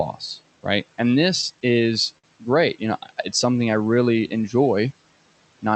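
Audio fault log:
1.41–2.25 s, repeated stalls (stutter): the jitter buffer ran dry eight times as packets arrived late, and each time the last sound was stretched to cover the wait, longest about 52 ms, totalling 124 ms. Nothing is lost, but the passage drags and hiccups.
3.46–4.29 s, jitter buffer slow-down: to rebuild its reserve, the receiver repeated single pitch periods and bits of pause, adding 108 ms. Playback runs at about 88% speed with unchanged pitch, so sounds come out drawn-out.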